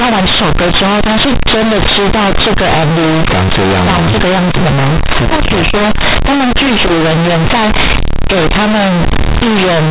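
Throughout the speech, companded audio is read as linear. The mu-law bytes play as plain 8-bit samples, never expanded. Each sign change swings the output across half its range. Quiet parts come out as loud as peaks. It sounds harshly buzzy, with heavy noise in pauses.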